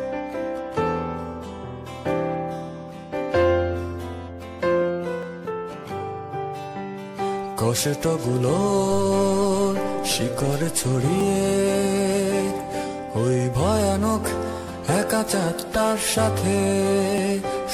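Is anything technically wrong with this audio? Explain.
Yes: overlap between stream segments at 5.23, 11.21 and 17.18 s, about every 6 s. Cutting overlapping time stamps drops a few milliseconds, causing a tiny skip, a waveform step and a thin vertical spectrogram line.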